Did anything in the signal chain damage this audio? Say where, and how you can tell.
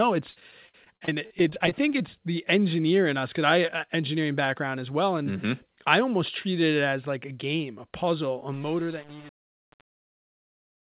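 Yes. At the network stage, repeated packet loss from 0.31 to 2.01 s, ending before "the engineer in us", leaves nineteen gaps of up to 49 ms, each concealed by extended sound.

At the gain stage, truncation distortion hits the fade-out after "game a puzzle a", from 8.53 s. Without dither, steps fitting about 7 bits make the tail gritty.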